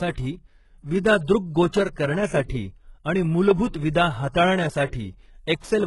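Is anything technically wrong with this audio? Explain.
Yes. Heavy HE-AAC compression damages the speech throughout. Nothing remains above 11.5 kHz. The treble is likely rebuilt from copied lower bands, so s sounds turn gritty and metallic.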